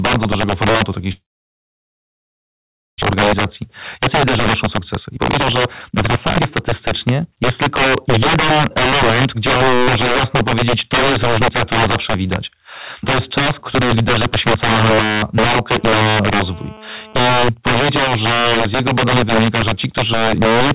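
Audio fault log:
Throughout: integer overflow. Loud speech peaks are driven roughly 10 dB past the top of the integer range, so some samples wrap to the opposite sign instead of being held at the limit. Each peak flips across the full range, giving violent cracks far sharper than the flattened, fuzzy edge of ordinary clipping.
1.12–3.04 s: long network dropout, likely from a stretch of audio that never arrived. The last sound carries on briefly as a fading buzz or hiss, then near silence fills most of the 1.9 s gap, and speech resumes with about a second missing. Unlike a short packet loss, the gap is long enough to fall silent.
3.13–6.44 s and 7.81–8.56 s: jitter buffer speed-up. The receiver trims short pitch-period pieces again and again to cut a built-up delay, about 700 ms in the first stretch (speech at 121% speed) and around 70 ms in the second (108%). The pitch stays the same, so this is hurried speech rather than a tape-speed pitch shift.
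15.76–17.20 s: GSM phone buzz. A nearby 2G phone in a call transmits bursts at 216.7 Hz, and the audio circuit rectifies them into a hard, raspy 217 Hz buzz with many harmonics, about 27 dB below the speech. It is steady and bears no relation to the speech, unlike mains hum at 50 or 60 Hz, which is smoother and lower.
17.21–20.21 s: GSM signalling bursts. The same phone, in a call with its user silent, now sends only short groups of bursts, heard as even ticks with a longer 217 Hz buzz twice a second, roughly 35 dB below the speech. The ticking pattern separates it from the continuous buzz just before.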